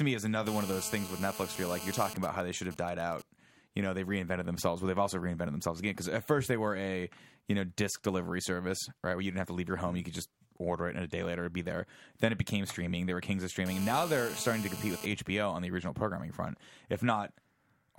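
From 0.47 to 2.14 s a hard, raspy 217 Hz buzz full of harmonics sits about 10 dB below the speech. This is GSM phone buzz: a nearby 2G phone in a call pulses its transmitter 217 times a second, and the audio circuitry rectifies those radio bursts. From 2.16 to 3.22 s it gives way to quieter, even ticks with a longer buzz twice a second. These are GSM signalling bursts, from a nearby 2G phone sending only sparse bursts while its user is silent in the call. The steady GSM phone buzz returns from 13.66 to 15.06 s, again about 10 dB below the speech.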